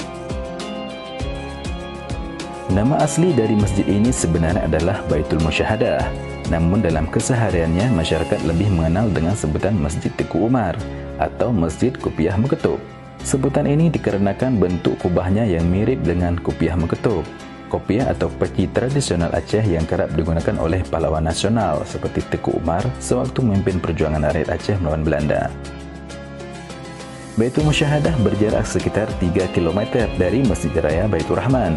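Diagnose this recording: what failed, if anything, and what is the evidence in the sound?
Nothing in the sound points to a failure at any stage of the chain, so there's nothing here to diagnose.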